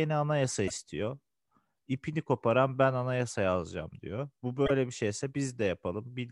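At 0.64 s and again at 4.64 s, damaged data in the compressed stream produces a short 70 ms glitch. The decoder misreads corrupted frames, loses sync and hunts for the next valid frame header before normal speech decoding resumes.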